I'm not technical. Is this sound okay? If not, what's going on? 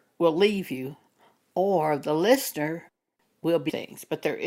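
No. At about 3.69 to 3.74 s the speech jumps ahead with a small blip, likely a stream segment skipped: one chunk failed to load and playback moved on.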